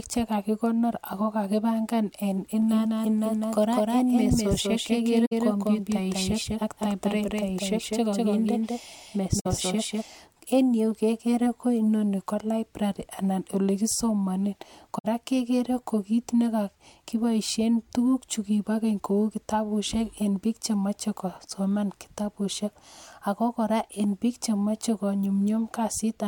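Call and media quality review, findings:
Speech heard twice from 2.62 s to 10.02 s: a second, equally loud copy trails by about a fifth of a second, dry, switching on and off abruptly. Doubled audio track, likely a slower second capture path or misaligned edit mixed in.

Soft-edged dropouts of 64 ms at 5.25 s, 9.39 s and 14.98 s; sound fades out and back. AAC frame loss with muting: decoder zeroed missing spectra, overlap windows smoothing edges; gap length fits three lost frames.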